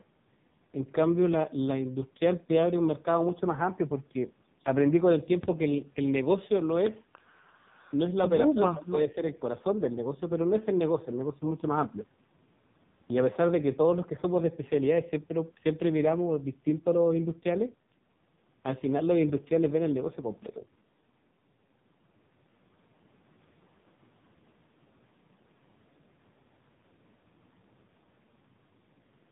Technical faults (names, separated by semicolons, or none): AMR narrowband mobile codec